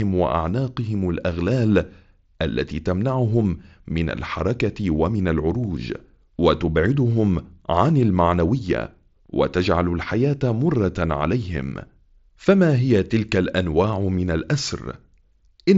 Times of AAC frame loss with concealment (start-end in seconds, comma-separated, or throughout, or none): none